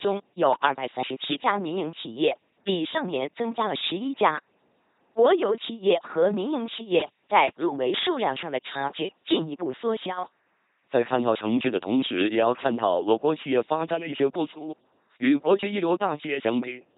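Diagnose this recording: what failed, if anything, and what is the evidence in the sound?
LPC-10 vocoder damage, present throughout the speech, with nothing reaching above about 3.9 kHz. The failure sits at the codec stage. The speech has the buzzing, mechanical robot quality of a coder that replaces the real voice with a synthetic excitation, either a pulse train or noise, shaped by a short all-pole filter. The heavy degradation and narrow band fit a 2.4 kbit/s LPC-10 coder. Because each frame is forced to be fully voiced or fully unvoiced, the natural breathiness and texture are lost.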